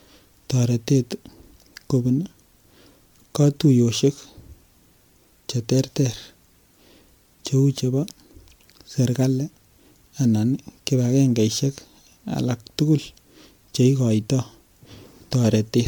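From start to finish the speech has a swirly, hollow, smeared quality and soft-edged attacks, more than a single pass at what sounds like 128 kbit/s MP3 would leave. That's likely generation loss: about seven re-encodes, each requantising on a shifted frame grid.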